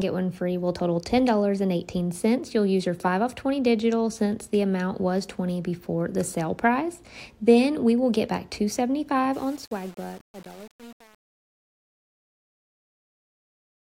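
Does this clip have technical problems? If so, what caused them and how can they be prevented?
Yes. Truncation distortion on the fade from 9.34 to 13.94 s: as the fade-out approaches silence, the level drops in coarse undithered steps and turns gritty, consistent with about 7-bit resolution. Prevent it by processing fades at high bit depth and dithering before final word-length reduction.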